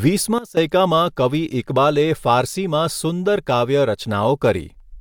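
A digital gain change, likely applied without a ramp, causes a sudden gain jump from 0.38 to 0.57 s: speech and background noise drop together by about 16 dB.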